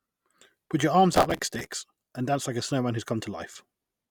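From 1.13 to 1.67 s, just before "and dance like a", the speech is overlaid with processor overload crackle, a gritty, tearing texture. The processor was failing to fill its short audio buffers in time, and the sizes involved point to buffers of around 5 ms, with roughly thirty deadlines missed. Each miss replays a fragment of stale audio with abrupt edges, and that rapid chain of discontinuities produces the crackle until the load eases.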